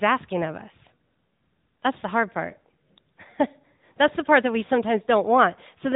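AMR narrowband mobile codec damage runs through the whole speech clip. The signal has been squeezed into a telephone-band model, so nothing above about 3.8 kHz survives, and the plainly audible buzzy, synthetic edge fits a mid-range mode near 10 kbps.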